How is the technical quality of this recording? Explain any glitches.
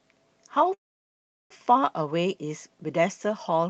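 The recording has one clear glitch, a call audio freeze. The speech travelled through a call codec whose band stops at 8 kHz. From 0.73 to 1.52 s the sound briefly carries on as a fading buzz or hiss, then drops to near silence for about 0.74 s. A jitter buffer running empty is the likely cause. Speech resumes where it stopped, roughly 0.77 s late, with nothing lost. A spectrogram shows a smeared tail, then a blank column. The waveform goes flat.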